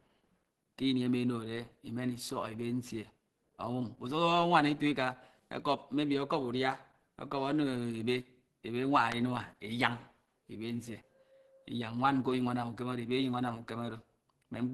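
From the first second to the last, the speech carries plainly audible codec damage, likely Opus compression. Nothing comes through above 12.2 kHz, and the voice has that muffled, hoarse, grainy quality you get when the encoder drops into its hybrid speech mode at a low rate. The texture fits something around 16 kbps. It's a consistent coarseness sitting on everything rather than the swirly holes you'd hear from MP3.

At 9.12 to 9.14 s there's a single loud pop, roughly 20 dB above the surrounding speech. It's a short, sharp crack laid over the talking, which carries straight on underneath without a break. That's the signature of a sudden voltage step or spike entering the chain, likely from a plug, switch, static discharge or a driver hiccup, with the downstream circuitry shaping it into one brief click.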